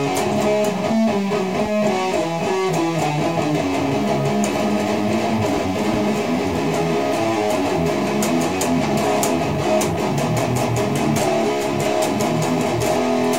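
Throughout the clip the audio was likely reduced to 7 bits by truncation, with no dither, giving low bit depth without dither. The rounding error tracks the signal, so quiet passages turn grainy and gritty, with distortion sitting only about 30 dB below the sound.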